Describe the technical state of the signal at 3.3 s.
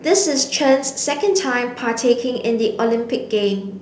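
At 3.3 s the speech is intact, carried through a G.722 WebRTC call path whose band stops at 8 kHz and with no fault present at that moment.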